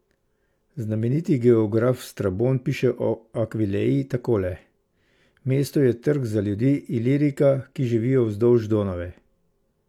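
Nothing in the speech stood out as a technical problem on listening.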